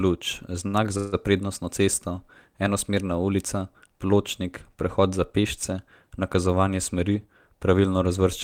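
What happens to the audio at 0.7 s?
A short stall from a late packet runs from 0.67 to 0.76 s, just before "za na prednostno cesto". A packet arrived late, so the receiver held the last sound for about 61 ms. Nothing is lost. The held sound drags briefly, then the speech resumes, 61 ms later.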